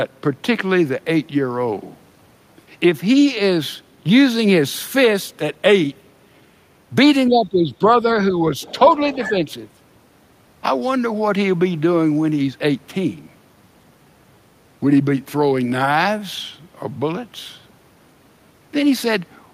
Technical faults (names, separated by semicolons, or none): speech suppressed in double talk; other side's voice leaking through